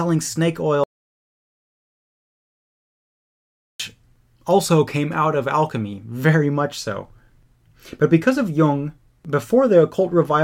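An audio dropout to silence runs from 0.84 s to 3.80 s in this speech clip, cutting the talking off abruptly and bringing it back mid-flow after nearly 3 s of silence with no room tone, most likely because the input connection dropped while recording continued.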